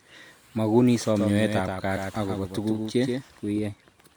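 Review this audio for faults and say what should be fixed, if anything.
From 1.16 s to 3.58 s, a doubled audio track: a full-band copy roughly 150 ms late, about 5 dB quieter, starting and stopping abruptly. A spectrogram shows every pattern repeated just to its right. Likely a second, slower capture path. Route each source once.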